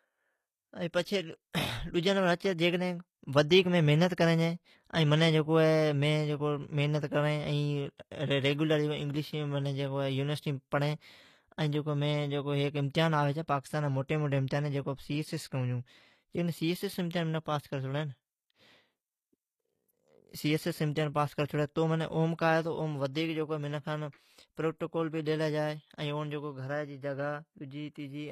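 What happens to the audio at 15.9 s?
At 15.9 s, as throughout the speech, s sounds turn gritty and lispy: likely HE-AAC compression at a low bitrate (around 24 kbps), rebuilding treble from copied lower bands rather than simply cutting it off.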